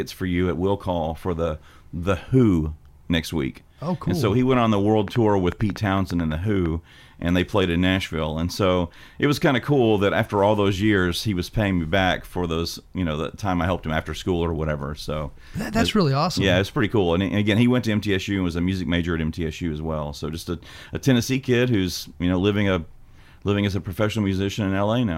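From 5.08 to 6.67 s a train of clicks rides over the speech: about ten similar pops at roughly 6.3 per second, unevenly spaced and jumping to around 10 dB above it. Likely interference from nearby gear or a faulty connection or power supply repeatedly injecting a pulse.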